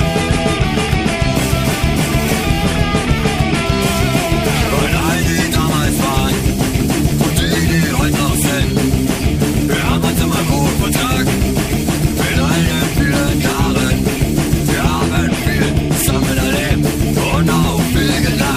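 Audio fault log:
Nothing stood out on listening to this audio.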